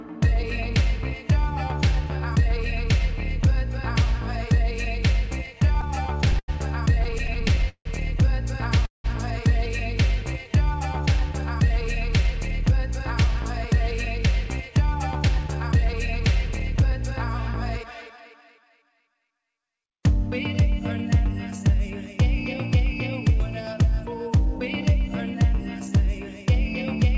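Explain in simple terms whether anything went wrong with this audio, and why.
Repeated stalls (stutter) happen twice. From 5.46 to 6.5 s and from 7.04 to 7.87 s, the audio arrived too slowly, so the playback kept running dry. The receiver stretched the last bit of sound to fill 13 and then 10 small gaps, the longest up to 90 ms and 164 ms. The sound drags and stutters, but nothing is lost.

A call audio freeze follows at 8.86 to 9.06 s. The sound holds for about 0.19 s, and most of that is silence. The likely cause is data held up on the way. When it arrives, the audio resumes where it stopped, so a pause is added rather than anything cut.

Jitter buffer speed-up shows up three times. Too much audio had piled up waiting to play, so the receiver trimmed tiny slices to catch up. From 12.27 to 13.74 s it plays 3% fast, from 14.26 to 16.92 s 6% fast, and from 17.83 to 19.29 s 9% fast. The pitch stays the same, but the last two stretches sound hurried.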